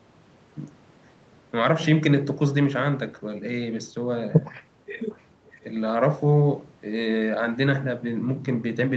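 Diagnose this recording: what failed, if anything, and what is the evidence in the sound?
An echo leak in the call processing stage. A faint, delayed copy of the speech surfaces from 4.97 to 5.22 s and again from 5.5 to 5.61 s, trailing the original by about 464 ms and sitting roughly 30 dB below it. The likely cause is a far end playing the call over a loudspeaker, where its echo canceller failed to fully subtract the microphone pickup and returned the residue down the line.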